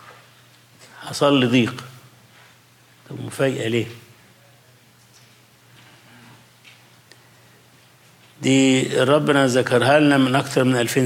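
Nothing here trips the ear at all: no glitches, dropouts or odd artefacts turn up anywhere in the recording, so there's simply nothing to flag.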